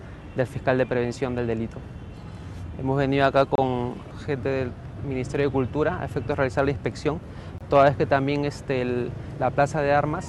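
At 3.55 s the sound drops out for about 28 ms. At 7.58 s it drops out again, for about 25 ms. Both are gaps between stream segments. The time stamps of adjacent segments don't quite meet, so the player inserts silence to bridge them. Each hole has abrupt edges and cuts the sound cleanly. The two gaps sit about 4 s apart, which fits segments of 4 s. Nothing is missing; the audio resumes where it stopped.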